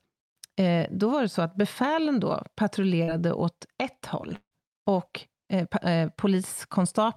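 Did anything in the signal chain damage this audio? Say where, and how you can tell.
Yes. At 3.03 to 3.11 s there's a brief smear: short concealed packet loss on the network side, with the decoder stretching the last sound over a 40 ms hole.

From 4.36 to 4.54 s the sound becomes a fading synthetic continuation, falls silent, then resumes with 160 ms missing. That's likely a long network dropout.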